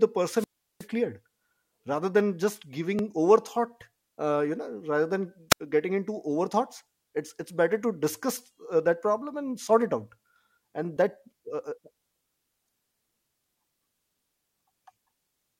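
The clip is speech with two wireless microphone squelch dropouts. From 0.35 to 0.87 s, hiss swells and the output falls to near silence for about 367 ms. At 5.50 to 5.60 s, a shorter hole of about 78 ms comes just before "getting into". In both, the analogue FM signal fades and the receiver's squelch mutes it. There are also two overlaps between stream segments. A click or tiny skip falls at 2.99 s, right after "rather than just", and another at 10.97 to 10.99 s. The spacing fits 4-second segments whose time stamps overlap. The player trims sound that was never doubled, so the waveform jumps.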